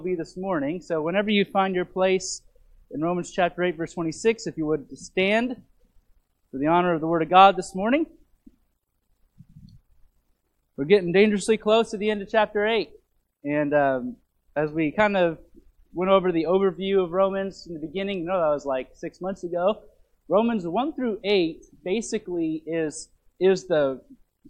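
At 3.86 s the decoder failed to play part of the compressed stream: frames were either missing from the file or rejected as damaged, a case of compressed frames skipped. Playback jumps forward by roughly 20 ms, with the sound lurching slightly ahead.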